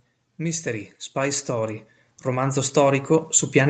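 From 0.37 s to the end of the clip at about 3.7 s, the level climbs steadily as automatic gain rising takes hold. The gain control judged the incoming speech too quiet and kept raising its gain, so the voice and the background noise swell together rather than the voice alone getting louder. The rise is gradual over several seconds, within a call microphone path whose bandwidth stops at 8 kHz.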